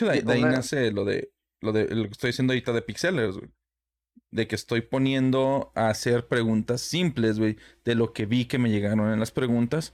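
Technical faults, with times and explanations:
0.56–0.58 s, loud pop: a single sharp pop between "de ahí" and "lo de lo", peaking roughly 10 dB above the speech, which continues underneath. A brief voltage pulse, likely from a switch or static discharge, was added to the signal and shaped by downstream circuitry.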